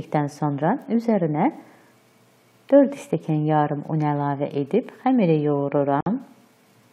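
At 6.01 s a gap at a join of encoded pieces opens: about 57 ms of silence, left by untrimmed encoder delay and padding, with smeared edges.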